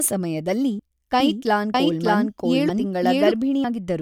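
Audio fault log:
0.79 s, 1.74 s and 3.64 s: audio missing between chunks. The sound jumps forward abruptly each time, with about 50 ms gone and the two sides butted together without a gap. The spacing fits a recorder working in roughly one-second blocks, likely dropping a sliver at each handover.
1.20 to 3.34 s: doubled audio track. A second, equally loud copy of the speech runs about 0.7 s behind the original. It is dry and full-band with no room tail, and it cuts in and out sharply. This is likely a slower second capture path mixed back in.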